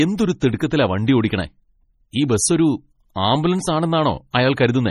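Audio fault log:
Throughout: likely MP3 compression. The speech has a heavy watery swirl and nothing above 14.1 kHz, which points to a bit-starved encoder around 32 kbps dropping weak bands frame by frame.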